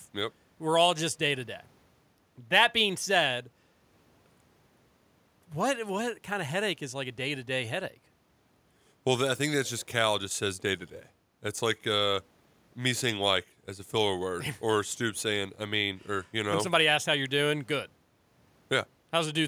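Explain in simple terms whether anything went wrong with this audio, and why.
Nothing went wrong here.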